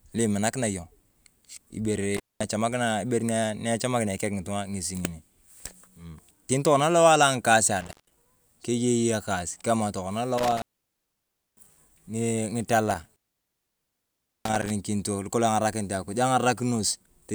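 Intermittent contact at 2.17–2.44 s, 7.81–8.18 s (just before "kiye ekaas"), 10.38–11.81 s and 12.91–14.71 s: a loose connection opens for roughly 0.16 to 1.3 s, so the speech drops to faint hiss with crackle at each edge. On a waveform these appear as near-flat gaps, and on a spectrogram as dark bands bounded by thin vertical clicks.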